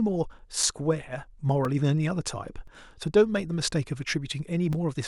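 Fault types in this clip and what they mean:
Periodic USB or driver dropouts: from 0.63 to 4.73 s, about five gaps of a few milliseconds each fall silent every 1.02 s, heard as evenly spaced ticks in the speech, as something blocks the USB bus or audio driver on a fixed schedule.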